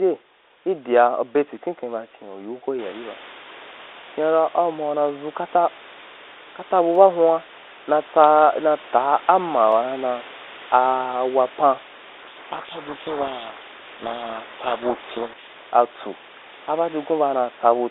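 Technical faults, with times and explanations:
6.95 s and 9.72 s, dropped samples: a few samples were likely lost from the stream, so the waveform jumps abruptly and each point sounds as a single sharp click.
12.22 to 15.43 s, codec payload misread: right after "a wapan", the decoder unpacks the G.726 code words in the wrong bit order, burying the speech in harsh distortion until both sides agree again.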